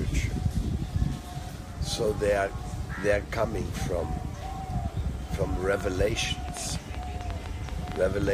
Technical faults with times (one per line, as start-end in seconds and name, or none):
5.73-8.28 train of clicks